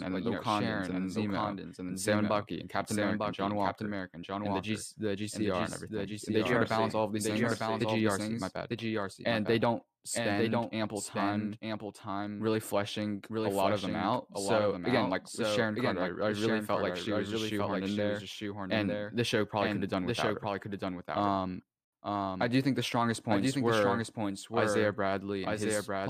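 A doubled audio track runs through the whole clip: a second, full-band copy of the speech trails the original by about a second, roughly 5 dB quieter, with no decay or room colour. Two out-of-step copies in an edit are the likely cause.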